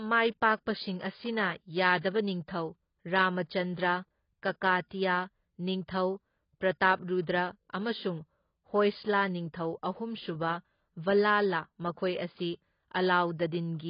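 AAC compression, heard throughout the speech: everything above about 5.1 kHz is missing, so the sound is dull, with a warbling, smeared texture and fizzy sibilants. The likely cause is AAC-LC coding at a very low rate, which fits a bitrate around 16 kbps. Starved of bits, the encoder lowered its cut-off and quantised the remaining frequency lines coarsely, leaving gaps that make sustained sounds swirl and hiss.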